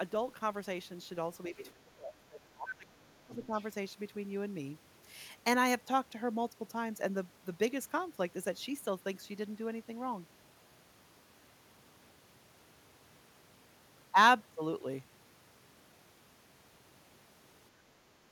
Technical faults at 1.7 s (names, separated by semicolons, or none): speech suppressed in double talk; other side's voice leaking through